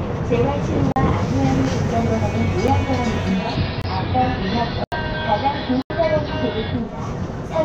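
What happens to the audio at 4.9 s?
At 4.9 s the audio drops out completely for a short moment. This is a block of digital silence running from 4.84 s to 4.92 s, an 80 ms stretch where the samples were replaced by zeros. Because the audio stops and restarts abruptly with no fade, each edge produces a sharp discontinuity.

That gap falls inside a longer stretch where the sound is lightly hissy. From 3.20 s to 7.12 s the receiver is in digital radio blending to analogue: a hybrid radio lost its digital signal and cross-faded over about 389 ms to the AM broadcast of the same station, then back. On the AM path a faint hiss sits roughly 35 dB under the signal, and the level drops by about 1 dB.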